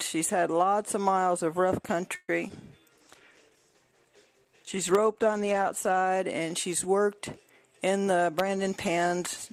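At 2.15 s a call audio freeze sets in: the last sound is carried on as a buzz that fades, drops to about 20 ms of silence, and resumes at 2.30 s exactly where it stopped. Nothing is lost, but about 130 ms of delay is added. The likely cause is packets held up in transit until the jitter buffer ran empty. Unlike packet loss, it inserts a gap rather than skipping material.

Between 2.48 and 2.51 s, short concealed packet loss produces a brief smear. About 10 ms is synthesised from the preceding sound before playback blends into later audio, so 40 ms of the original is skipped and the delay shrinks by roughly 30 ms. The content missing, not paused, distinguishes it from the freeze.

From 2.80 to 3.00 s a jitter buffer slow-down repeats pitch periods, adding 37 ms and running the sound at 85% speed. Sounds are drawn out, yet the pitch stays unchanged, which rules out a tape-style slowdown.

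At 2.94 s a call bitrate drop takes the encoder from 48 to 15 kbps, holding at the lowest rate for 3.03 s until 6.05 s. The sound turns coarse, watery and duller. Unlike the momentary glitches, this degradation persists across several seconds.

From 8.01 to 9.51 s a jitter buffer speed-up trims short pitch-period segments, removing roughly a tenth of a second and running at 107% speed. The audio sounds slightly hurried at the same pitch, the mirror image of the earlier slow-down.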